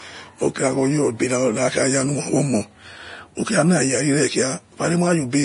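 From start to finish the speech sounds hissy and grainy, with roughened tones, smeared consonant attacks and nothing above 10.6 kHz. This is likely heavy Vorbis compression, consistent with a low bitrate near 32 kbps, where coarsely quantised treble turns fine detail into noise.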